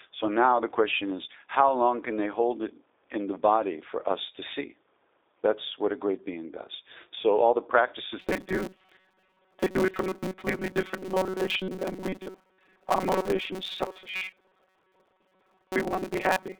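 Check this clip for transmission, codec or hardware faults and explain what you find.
Two faults are present: a low-bitrate telephone codec across the whole clip, and a robotic buzz over its second half.

The G.729 codec (G.729A, 8 kbit/s) shapes the speech throughout. Each 10 ms frame is rebuilt from a vocal tract filter, a pitch predictor and a few pulses, so the voice sounds slightly rough and synthetic, with plainly audible coding damage. The line band runs from 300 Hz to 3.7 kHz, and nothing passes above 4 kHz. On a spectrogram that shows as a hard ceiling with empty space above it.

Robotic sound from repeated short buffers begins at 8.20 s, right after "all the", and lasts to the end. The sound becomes a rigid, metallic buzz at 188 Hz that still roughly tracks the speech. A period of about 5.3 ms fits the likely cause: new audio arriving too seldom, with the last short buffer replayed while real audio is skipped. 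Repeated material makes up most of the stretch, about 70 percent. On a spectrogram this appears as evenly spaced harmonic lines at multiples of 188 Hz. The waveform shows identical short cycles repeating.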